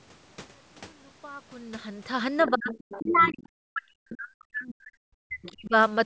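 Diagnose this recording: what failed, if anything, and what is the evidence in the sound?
Call processing: the other side's voice leaking through at 2.39–2.5, 2.7–3.33 and 5.42–5.55 s, faint spectrogram traces about 20–25 dB down, likely residual loudspeaker echo.

Speech suppressed in double talk at 2.48–2.71 and 2.99–5.74 s: the waveform envelope caves in by roughly 35–40 dB, likely the echo canceller ducking both voices.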